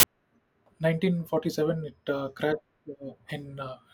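File tags played as audio open the clip, from 0.00 to 0.03 s. An embedded cover picture, stored as compressed data, is read as though it were speech samples, so its near-random bytes come out as a hard-edged burst of very loud white noise before the speech begins.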